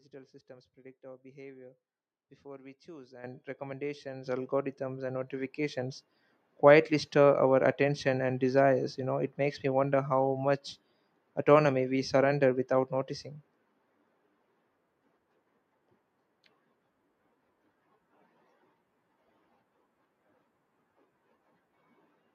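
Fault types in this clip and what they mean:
Microphone volume stepped up: the call software judged the input too quiet and raised the device's gain in three sudden steps, about 10, 7 and 3 dB, at 3.24, 4.26 and 5.28 s, so voice and background jump louder together, first after "behavior before we choose".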